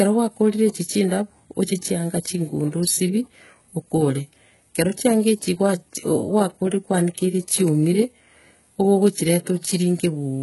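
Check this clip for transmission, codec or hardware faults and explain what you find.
One codec fault runs through the whole speech clip: the treble is synthetic rather than original, which is likely HE-AAC compression. Throughout the clip, nothing lies above 11.5 kHz, and the band below that is heavily damaged. The top octaves are rebuilt by copying lower bands upward under a coarse envelope, so harmonics fail to line up across the crossover and s sounds turn gritty and lispy. The damage points to a very low bitrate, around 12 kbps. A plain low-pass or narrowband codec would sound dull instead; here the treble stays bright but metallic.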